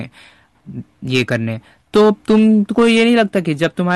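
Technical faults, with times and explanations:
Throughout, hard clipping: the speech was driven about 7 dB past what a stage in the chain could pass, so its loudest peaks, roughly three percent of the signal, were sliced flat. Those squared tops add high harmonics, heard as crackle on the peaks.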